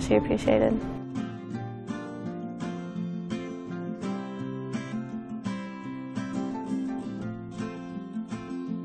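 No technical faults can be heard anywhere in this audio.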